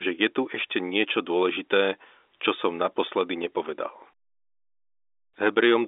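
No faults found; the speech is band-limited to about 300 Hz to 3.6 kHz, as expected for G.711 A-law telephone coding, which fits a 64 kbps line.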